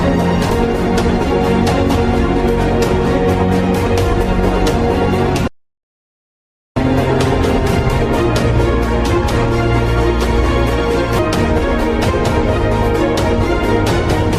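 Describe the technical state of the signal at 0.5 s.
At 0.49 to 0.51 s the signal has a skip ahead: about 0.7 s of audio is discarded, likely by the jitter buffer shedding backlog, and playback jumps straight to later material. No gap is inserted, so the two sides butt together abruptly.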